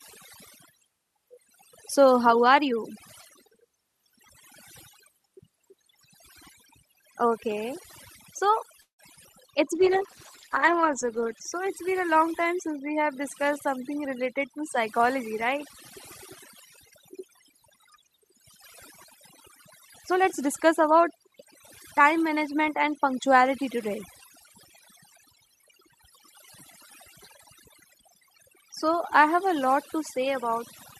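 Across the whole recording the background sits in near silence flecked with twinkling specks. That is overdone noise removal: the noise reduction was set so strong that it pulled individual frequency bands right down whenever they came near its noise estimate, taking quiet parts of the speech with them.

From 8.81 to 9.01 s the last sound hangs on as a fading buzz, then drops to silence for about 110 ms before the speech resumes where it left off. This is a call audio freeze, likely caused by packets being held up so the jitter buffer ran dry. The receiver stretched the final sound over roughly 175 ms, so a gap was inserted rather than anything being lost.

At 9.15 to 9.19 s there is a brief smear where about 20 ms of audio is missing. That is short concealed packet loss: the audio never reached the decoder in time, so the receiver patched the hole by extending the preceding sound and then blended back into the real signal.

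From 9.75 to 11.49 s, starting just before "it's been a long", the speech turns rough and muffled. This is a call bitrate drop: the encoder was pushed from 32 to 12 kbps and stayed at the lowest rate for 1.67 s, coding coarsely and trimming the high frequencies.

From 20.11 to 21.37 s the speech runs about 7% fast at unchanged pitch and sounds hurried. It happens again more gently from 22.0 to 23.11 s, at about 5%. Both are jitter buffer speed-ups: to cut excess delay, the receiver snipped out short pitch-period pieces, removing roughly a tenth of a second in the first stretch and about half that in the second.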